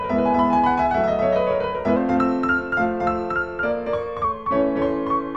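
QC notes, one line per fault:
throughout, doubled audio track: a dry, full-band second copy trails about a third of a second behind at roughly equal level, likely from a slower capture path mixed back in.
1.96 to 4.24 s, drift correction step: the audio speeds up 5.65% and rises about 95 cents, nearly a semitone, then snaps back, likely a clock-matching rate jump.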